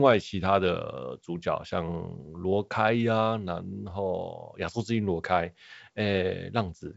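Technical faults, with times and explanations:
The speech carries the normal signature of G.722 wideband telephone coding at 64 kbit/s, with its content stopping at 7.7 kHz and any coding trace at most faint.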